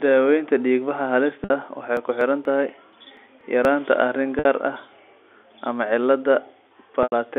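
At 1.44 s, a 60 ms gap (about two lost packets) shows packet loss with pitch repetition: the receiver loops the last pitch period, heard as a brief buzzy hold fading out. From 1.97 to 3.65 s, periodic USB or driver dropouts skip roughly 10 ms of audio every 0.24 s, producing about seven evenly spaced ticks. The same packet-loss concealment recurs at 4.39 s (60 ms) and 7.03 s (90 ms, roughly three packets), with the longer gap fading further before the speech resumes, all over a G.711 telephone-band line.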